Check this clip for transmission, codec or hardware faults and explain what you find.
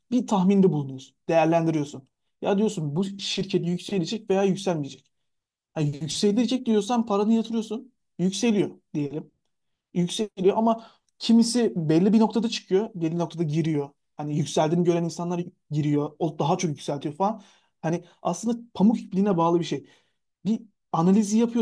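No transmission, codec or hardware faults.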